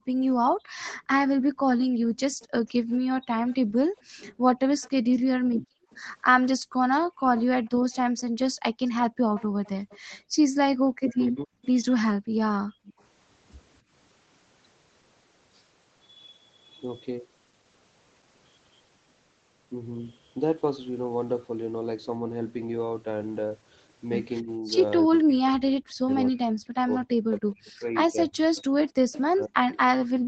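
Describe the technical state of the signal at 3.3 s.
The far end's echo canceller is likely failing to remove all of what its microphone picks up from the loudspeaker, so a faint echo leak runs from 0.8 s to 13.03 s, covering this moment. A delayed copy of the speech returns about 270 ms behind the original, very low at roughly 25 dB under the direct speech. It sounds like a ghostly trailing repeat beneath the talker.

Both sides talk at once at the same moment, and the echo canceller cannot separate the near-end talker from the loudspeaker echo, so it turns both down. This is likely what produces speech suppressed in double talk from 3.26 s to 3.36 s. The talker's speech drops by about 40 dB for roughly a tenth of a second, heard as a brief hole that nearly silences the speech. Throughout, the call's microphone processing limits the band to 8 kHz, which is normal.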